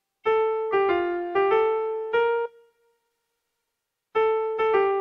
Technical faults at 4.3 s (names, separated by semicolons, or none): jitter buffer speed-up